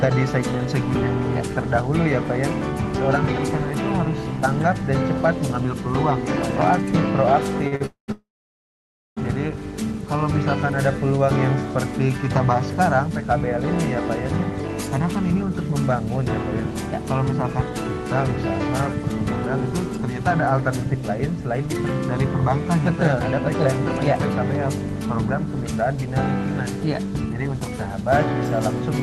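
Short stalls from a late packet come at 7.67 to 7.74 s and 7.76 to 7.82 s. Each time the next packet was overdue, the jitter buffer emptied, and the receiver stretched the last sound for 43 ms. Nothing is lost, but the sound briefly hangs with a faint buzz or dip.

A call audio freeze follows at 7.86 to 8.10 s, then a longer one at 8.12 to 9.18 s. These were likely caused by packets held up in transit. The receiver drew out the last sound as a fading buzz or hiss that dropped to silence, for about 110 ms and then 920 ms. Playback resumes where it stopped, so 219 ms and then 1045 ms of delay were inserted without losing audio.

Jitter buffer speed-ups run at 14.95 to 15.72 s at 104% speed, then at 19.64 to 23.66 s and 25.07 to 28.10 s at 102%. To shed the extra delay, the receiver cut many tiny pitch-period slices, roughly 40 ms in the first stretch and about 70 ms in each later one. The sound runs slightly faster with its pitch unchanged. 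Throughout, the Opus call path limits the top end to about 12 kHz.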